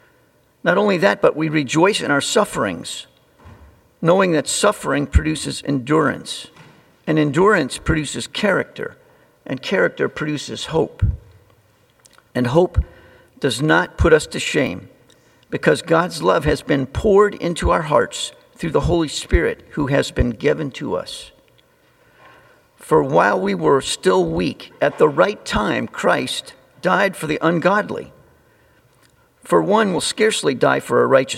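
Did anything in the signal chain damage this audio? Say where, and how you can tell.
Yes, at the driver or buffer stage: there are three short skips at 13.87, 14.67 and 29.98 s, each heard as the sound jumping forward with no gap of silence. These are likely dropped buffers (overruns), where incoming samples were overwritten before the software read them, so the two sides of the loss are spliced together. About 10 ms is missing at each of the first two and about 30 ms at the last. A network dropout would leave a gap or concealment instead.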